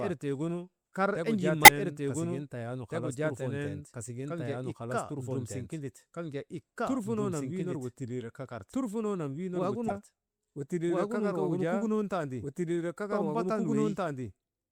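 A doubled audio track runs through the whole recording: a second, full-band copy of the speech trails about two seconds behind, at roughly the same level, with no decay or room colour. The likely cause is a second capture path or an edit holding two copies out of step.

Damaged data in a compressed stream appears at 1.64–1.69 s and again at 9.86–9.91 s. Each time, the decoder misreads corrupted frames, loses sync and hunts for the next frame header, producing a brief chirp, squawk, click or short hole.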